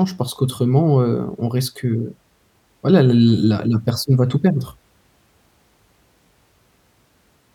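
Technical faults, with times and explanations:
4.57 to 6.14 s, drift correction step: the speech abruptly slows by about 6 percent and drops in pitch by roughly 112 cents, a little over a semitone flat, so the voice sounds suddenly sluggish and detuned for about one and a half seconds before snapping back to its normal speed and pitch. This is likely software that reconciles two mismatched clocks, changing the playback rate in a single step to rebalance its buffer, which shifts speed and pitch together.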